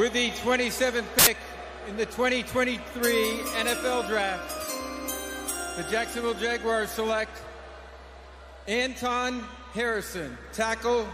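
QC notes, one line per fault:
1.19–1.27 s, samples built from the wrong bytes: sample bytes misassembled for 80 ms, so low-order bits dominate, bursting into loud, harsh broadband noise.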